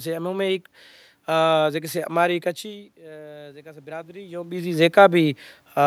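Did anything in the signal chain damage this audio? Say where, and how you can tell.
Yes. Automatic gain rising in call processing: from 2.96 to 4.6 s the voice and room noise swell together by about 7 dB, unlike a talker moving, where only the voice changes.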